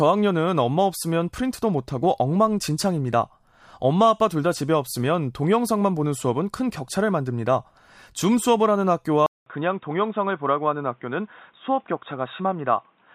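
At 9.26 s the recording likely switched its input to a poorer device, such as a second microphone or a headset's call profile, and it stays there until the end of this speech clip. The switch leaves a gap of 200 ms, then the sound comes back dull and boxy. Nothing above 3.8 kHz gets through, a faint new background noise sits about 45 dB below the signal, and the loudness stays about the same.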